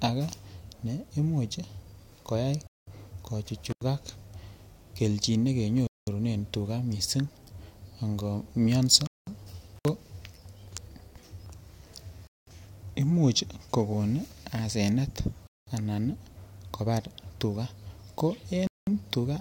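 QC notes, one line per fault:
2.67, 5.87, 9.07, 12.27, 15.47 and 18.67 s, gap between chunks: six holes of 200 ms each, the one at 5.87 s ending just before "tugaa miisik". They recur every 3.2 s, which fits 3.0 s blocks of audio with silence inserted at each join. Nothing is missing, but the speech halts and resumes. The regular spacing and the clean, dead-silent holes with hard edges set these apart from a contact fault.
3.70–3.81 and 9.76–9.88 s, intermittent contact: two brief dropouts where the signal path opens for about 88 ms and then about 60 ms, as a loose plug or cable would do. Each opens and closes with crackle, and faint hiss remains while the line is open. Unlike the chunk gaps, these come at irregular points, their edges are noisy rather than clean, and the hole is not pure silence.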